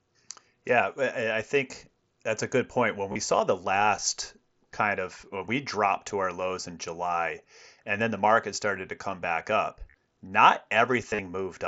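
Concealed Bluetooth headset packet loss occurs at 3.12–3.16 s before "saw the last kind", at 6.09 s, at 9.91–9.94 s after "to come back up", and at 11.10–11.19 s after "come back up not". In each case the receiver filled the gaps by repeating recent waveform; the single lost frame at 6.09 s is nearly hidden, while the runs leave brief buzzy, tone-like patches with a slight warble at recovery.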